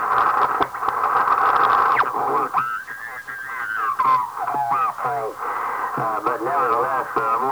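From start to finish the audio was likely reduced to a very low bit depth without dither, with each sample rounded to one of the levels of what sounds like 7-bit resolution. Because nothing randomises that rounding, the error tracks the waveform itself, sitting only about 30 dB below the signal. Quieter moments turn gritty.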